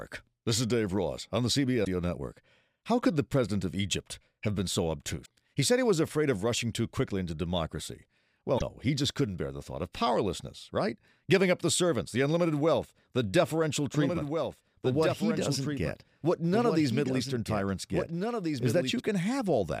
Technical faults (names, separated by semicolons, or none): damaged data in a compressed stream; doubled audio track